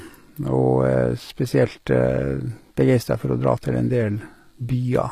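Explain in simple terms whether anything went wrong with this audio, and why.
Yes, the whole recording has a clear fault. The s sounds and treble turn gritty and metallic, and nothing sounds above about 15 kHz. This points to likely HE-AAC compression, which fakes the treble by copying lower sounds upward.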